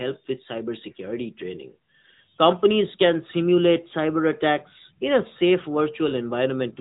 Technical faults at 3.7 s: AMR narrowband mobile codec

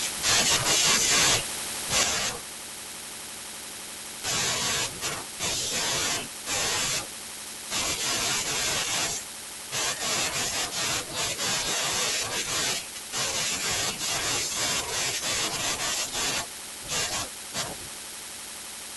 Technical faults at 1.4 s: none

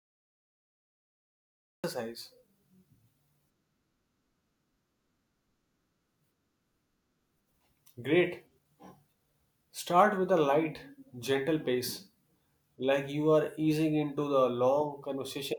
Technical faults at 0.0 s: cut-off start

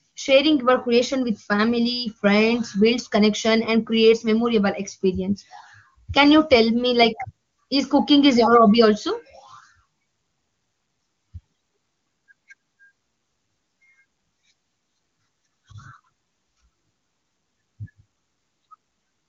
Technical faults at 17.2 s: none

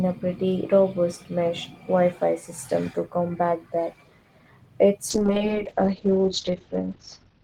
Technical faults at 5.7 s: call bitrate drop

